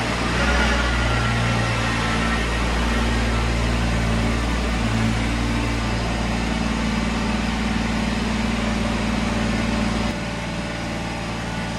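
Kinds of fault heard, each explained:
Block size mismatch (truncated): From 3.67 to 5.76 s the end of each block is dropped as it passes between stages, leaving a buzz at about 91.9 Hz, the block rate. The speed stays normal. Unlike mains hum, the buzz is made of regular gaps in the audio.
Channel delay (doubling): From 10.11 s to the end, one channel arrives 46.4 ms late and is summed with the other, which fits a 2048-sample buffer. The result is a single distinct repeat at equal level, not the many fading reflections of reverb or a comb-filter colouration.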